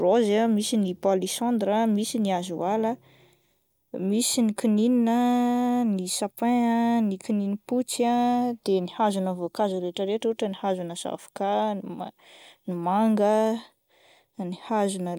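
Speech recording; no technical faults can be heard.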